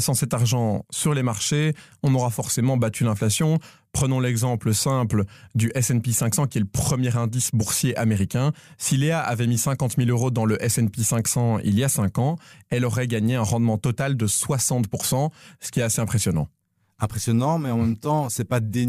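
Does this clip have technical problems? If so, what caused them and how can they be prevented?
No, this clip has no technical problems, so nothing needs preventing.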